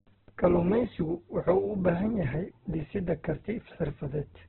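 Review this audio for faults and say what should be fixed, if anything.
Throughout, the speech sounds rough, grainy and boxed-in, with nothing above 4.1 kHz, likely heavy Opus compression narrowed to narrowband at a rate fitting around 8 kbps. Encode at a higher Opus bitrate so the full bandwidth survives.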